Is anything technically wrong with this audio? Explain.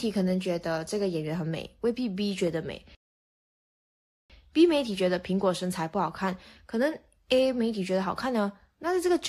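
Yes. At 2.95 s the speech drops to silence until 4.30 s, a rebuffering stall. Playback exhausted its downloaded audio and paused until more data arrived, inserting about 1.35 s of dead air. The speech then resumes exactly where it stopped, with nothing skipped.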